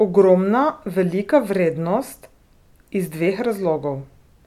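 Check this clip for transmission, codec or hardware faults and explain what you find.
I find no faults to explain in this clip.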